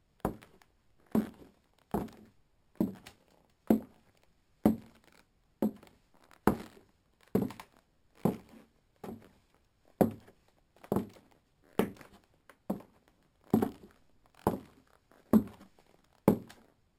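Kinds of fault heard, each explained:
Imaging from sample-and-hold upsampling: A bright, metallic fizz sits over the whole clip, rising and falling with the sound's loudness, and its lowest layer, between 6 kHz and 12 kHz, moves the opposite way to the pitch. It is about 25 dB below the sound itself. The band placement points to audio at about 12 kHz being raised to 44.1 kHz by repeating each sample without a smoothing filter, which leaves mirrored spectral copies above 6 kHz.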